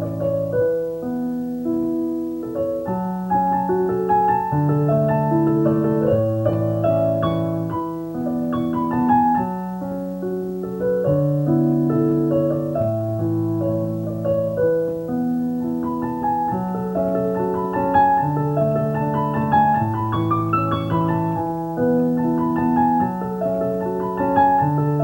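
Video or display buzz runs throughout: a 59.94 Hz field-rate buzz with hash, roughly 30 dB down, plus a 15.7 kHz line tone, showing as steady horizontal spectrogram lines.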